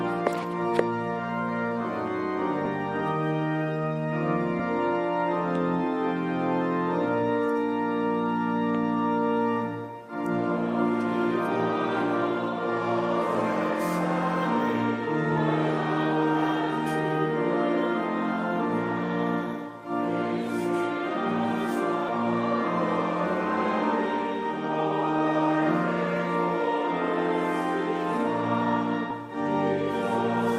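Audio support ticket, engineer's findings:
Compressed frames skipped at 4.59–4.61 s, 22.08 s and 29.10 s. Audio jumps forward: about a tenth of a second lost, then about 0.3 s, then roughly 40 ms. Gap sizes are whole multiples that fit 10 ms frames. Probable component: decoder dropping damaged frames, or frames missing from the file.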